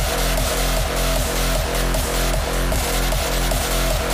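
At 2.72 to 2.76 s, chunks play out of order. One 10 ms chunk arrives three chunks late and sounds after the ones meant to follow it. Nothing is lost. The sequence is scrambled, though, and three hard joins give a brief jumbled stutter.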